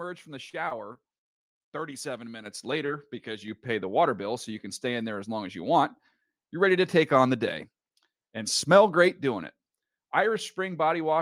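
From 0.49 to 1.56 s, just after "from the", the speech breaks up with repeated packet loss and takes on a robotic sound. Six separate gaps open in about a second. The longest is 50 ms. Each gap is patched by stretching the last bit of sound forward, and the next gap follows soon after. About 18% of the stretch is patched sound. The result is choppy, with pieces of speech missing.

At 2.46 s the microphone volume steps up. The call software judged the input too quiet and raised the device gain in a single jump of about 8 dB. Voice and background rise together, instantly. The jump is abrupt. It does not fade in the way a natural change in loudness would.

From 2.86 to 2.99 s there is a short concealed packet loss. About 20 ms of audio never arrived in time. The receiver carried the previous sound forward to cover the hole, then blended back into the real signal. The patch adds a few milliseconds. 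It is heard as a brief smear or wobble in the speech. A small piece of the sound is lost.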